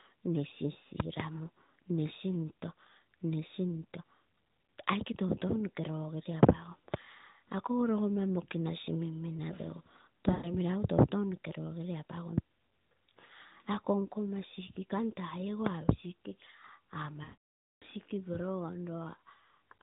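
At 10.32 s, 13.26 s and 17.24 s you hear lost AMR speech frames: radio errors corrupted frames, so the decoder kept repeating the last good pitch and vocal tract settings while fading the level. The 40 ms gap at 13.26 s is just a quick warble. The 120 ms one at 10.32 s smears and dips. The 580 ms run from 17.24 to 17.84 s drones, fades to silence, and comes back rough, all over the band-limited narrowband codec sound.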